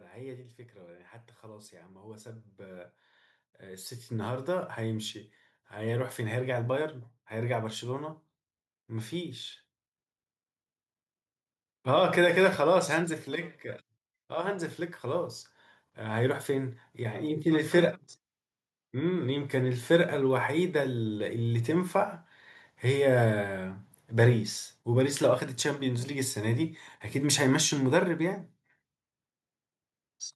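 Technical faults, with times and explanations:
0.08–9.45 s, automatic gain rising: the gain control judged the input too quiet and steadily raised its gain by about 13 dB, so speech and background noise swell together. On a waveform the envelope ramps up; on a spectrogram the noise floor brightens gradually.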